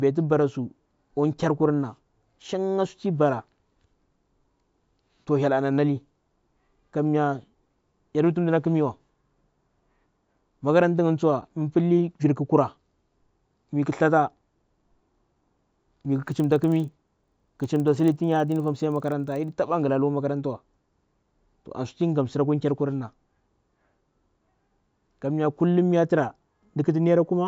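From 16.12 to 19.52 s, the resampler restarted on every block. Each 40 ms block's edges were mishandled, causing a 25 Hz buzz under the speech.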